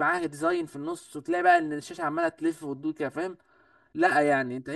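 From start to finish the speech carries channel delay (comb filtering): one channel trails the other by roughly 3 ms, and when the two are summed to mono the shared content cancels at regularly spaced frequencies, the first near 150 Hz and the rest repeating at even intervals above it. The speech sounds hollow and phasey, as if heard through a tube. On a spectrogram, fixed dark horizontal bands run through the whole clip; the waveform itself shows nothing obvious.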